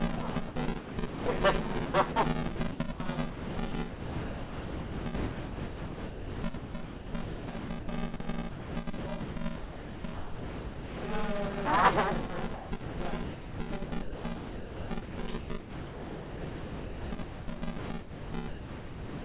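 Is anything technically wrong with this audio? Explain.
Yes, there are three problems.

Buffer tearing runs throughout. The writer and reader of the playback ring buffer have drifted so that they cross within each period. About half of every buffer replays audio from roughly 10 ms earlier, and the hard joins produce a continuous rattling buzz at 200 Hz.

Sound chopped by the voice detector occurs from 0.16 to 1.26 s, 1.86 to 2.16 s, 2.56 to 3.0 s, 3.3 to 7.88 s, 8.5 to 11.04 s and 12.54 to 19.24 s. The sender's voice activity detection likely kept toggling, so stretches of quieter sound were replaced with comfort noise. The two longest stretches lose 3.66 s and 4.9 s in total to comfort noise.

Sound dropped by the voice detector occurs at 8.16 to 8.2 s. The detector likely judged a quiet moment to be background and stopped sending. About 30 ms of sound gives way to a 40 ms burst of steady comfort noise before the signal returns.

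All of this sits on a narrowband call path with nothing above 4 kHz, consistent with G.711 mu-law.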